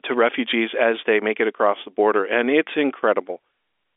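No technical faults are audible in this speech recording.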